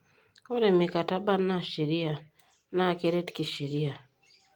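No technical faults can be heard in the speech.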